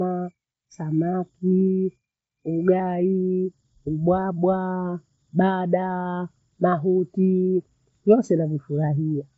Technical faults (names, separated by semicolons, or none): none